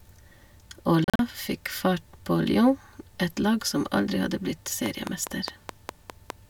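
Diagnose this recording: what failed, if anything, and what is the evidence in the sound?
Between 1.04 and 1.19 s the speech breaks up into several short holes, about 112 ms missing out of roughly 150 ms, the longest single gap around 37 ms. When it comes back it has jumped ahead, as if it kept playing underneath. That's a Bluetooth dropout at the wireless playback link, likely a burst of packets arriving too late and being discarded. The gap pattern fits about six lost packets.

From 4.86 to 6.31 s there's a train of clicks: seven or so sharp ticks, evenly spaced at about 4.9 per second, all alike in shape and poking out around 15 dB above the speech. They sit on top of the audio rather than replacing it. That points to the analogue side, likely interference from nearby equipment or a struggling interface coupling a repeating pulse into the signal path.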